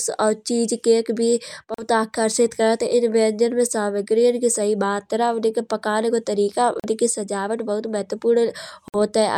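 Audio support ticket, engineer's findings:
Bluetooth dropout, three occurrences. Silent gaps at 1.74–1.83 s after "और चीज़ केक भी", 6.80–6.85 s before "सजावट बहुत", and 8.88–8.96 s. Audio resumes as though it kept playing. Likely cause is the wireless link to the headphones dropping late packets.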